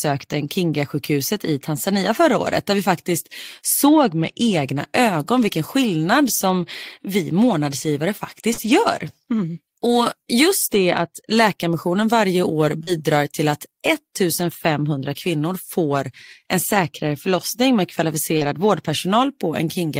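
At 8.53 s a short concealed packet loss appears: about 40 ms of audio failed to arrive in time, and the decoder extrapolated the preceding speech through 8.59 s before crossfading back, leaving a brief smeared wobble. Overlapping it, from 8.57 to 8.75 s, comes a lost packet rebuilt from error correction. Roughly 100 ms, spread over five separate packets, was restored from low-bitrate redundant copies in the following packets, so nothing drops out but the stretch sounds rougher and noisier. The same pairing recurs at 12.83 s, where another 40 ms concealment gap is patched by extrapolation, followed at 12.87 to 12.89 s by a single brief error-correction rebuild with the same grainy texture.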